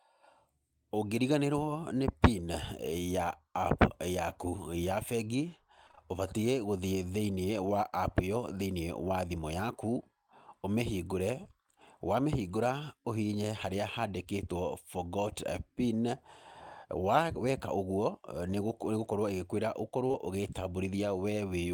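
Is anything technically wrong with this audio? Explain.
Yes. Around 5.87 to 5.99 s and 20.07 to 20.16 s, the speech briefly smears and wobbles, as if a sliver were stretched over. This is short concealed packet loss: successive 20 ms chunks at 5.87, 5.91, 5.95, 20.07 and 20.11 s arrived too late. The receiver padded each gap by extending the preceding sound before blending back in.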